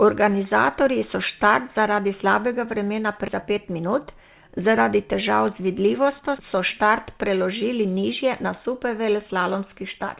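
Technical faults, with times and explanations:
3.28 s, skip ahead: right after "slabega vremena" roughly 0.7 s of speech is dropped, and the two sides join directly with no fill, so the sentence lurches forward.
3.42 to 4.92 s, jitter buffer speed-up: the buffer trims short pitch-period pieces, about 150 ms in total, so the speech runs roughly 8% fast at unchanged pitch, ending before "težav z vidljivostjo so".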